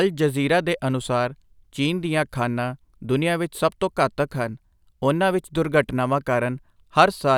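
No technical faults can be heard anywhere in this speech recording. There is nothing in the audio that needs a timestamp or a cause traced.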